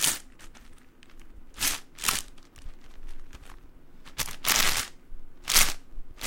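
From about 1.45 s to the end there's a block size mismatch with truncation. One stage writes longer blocks than the next reads, which fits 512-sample blocks being clipped, so each block's tail gets dropped. You hear a buzz near 91.9 Hz, and the audio runs about 1.07 times fast with its timbre intact.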